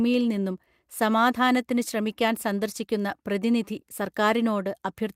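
No technical faults are audible anywhere in the speech.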